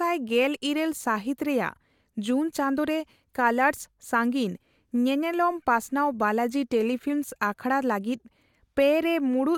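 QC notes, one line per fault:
No faults found.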